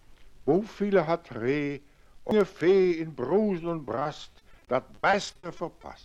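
At 2.31 s a CD skip occurs: the laser jumps to a different turn of the disc's spiral, so playback mutes for just a few milliseconds and resumes elsewhere. It sounds like a brief tick followed by an abrupt discontinuity where the material jumps forward or back.

From 3.85 s to 5.85 s there is repeated packet loss, heard as robotic sound. Dropouts recur throughout this span, each patched by extending the preceding audio. The gaps last up to 40 ms and total about 340 ms, roughly 17 percent of the stretch, leaving the sound choppy with pieces missing.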